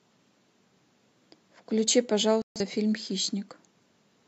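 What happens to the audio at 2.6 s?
At 2.6 s the speech is ending a corrupt frame muted gap, a silence running from 2.42 to 2.61 s, about three frame lengths. The decoder rejected damaged compressed frames and silence replaced them. The hole starts abruptly and timing holds, unlike concealment's smoothed fill or a skip.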